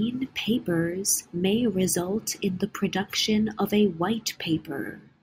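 Nothing stood out as a technical fault anywhere in this speech recording on listening.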